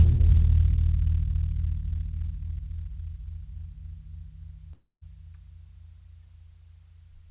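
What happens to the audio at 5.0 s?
At 5.0 s the music is inside a gap running from about 4.72 to 5.03 s, most likely a long network dropout. The receiver keeps extending the last sound as a fading buzz, and for the final 160 ms or so only silence remains. Unlike a brief mute or pause, the music then returns further along, with roughly 300 ms of it lost. That concealment buzz is dull, capped at 4 kHz by the G.711 call codec.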